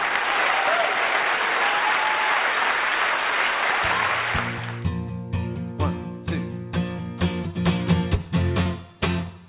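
At 8.63 to 8.67 s, short concealed packet loss: about 20 ms of audio arrived too late, and the decoder extended the preceding sound to cover it, heard as a brief smear.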